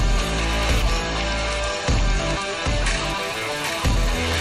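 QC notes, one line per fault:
Throughout: doubled audio track. A second full-band copy of the sound trails the original by about 0.7 s, roughly 5 dB quieter. It carries no decay or room colour, so it reads as a flat repeat rather than an echo. The likely cause is a second capture path or an edit holding two copies out of step.
1.05–3.05 s: adaptive stream at a lower bitrate. The treble cuts off abruptly, with nothing above 11.1 kHz, and codec artefacts rise, with no gap at either edge. The sudden switch fits an adaptive stream stepping down from about 128 to 48 kbit/s MP3 when the connection slowed.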